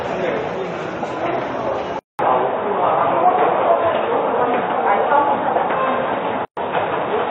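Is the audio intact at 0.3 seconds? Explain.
Yes, the audio is intact at 0.3 seconds, with no fault present at that moment.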